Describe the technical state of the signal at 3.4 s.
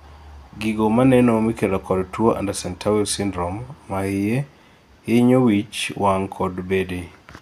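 At 3.4 s the speech signal is intact, with no audible fault at that moment.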